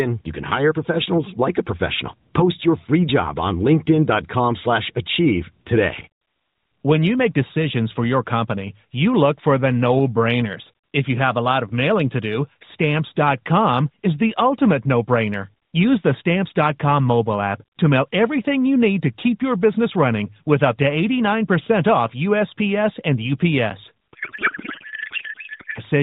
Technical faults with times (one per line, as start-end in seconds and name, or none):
23.70 gap between chunks
24.13-25.81 codec payload misread